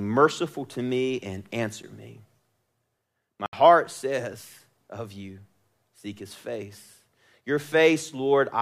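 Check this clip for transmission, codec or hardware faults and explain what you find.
Two faults, both blocks of digital silence in this speech clip, where the audio path failed to deliver samples and zeros were output instead. At 1.83 s, just after "to me and", a 9 ms gap gives a brief tick or dip. From 3.46 to 3.53 s, a 70 ms gap cuts the sound abruptly, leaving an audible hole.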